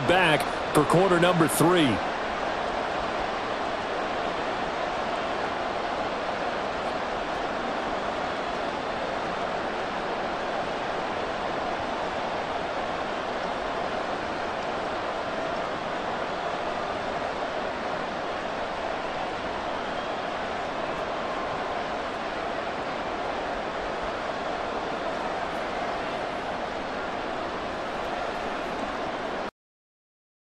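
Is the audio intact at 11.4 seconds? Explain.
No, at 11.4 s the audio carries MP2 compression damage, present across the whole clip: the likely cause is MPEG Layer II coding at a rate that sounds near 80 kbps, starving the upper sub-bands. It sounds dull and gurgly, and a spectrogram shows high bands flickering on and off.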